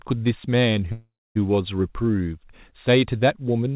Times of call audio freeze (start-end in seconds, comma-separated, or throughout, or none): 0.92-1.37